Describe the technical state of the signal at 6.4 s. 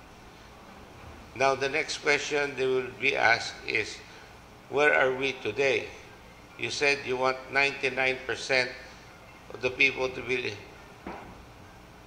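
At 6.4 s the signal is intact, with no audible fault at that point.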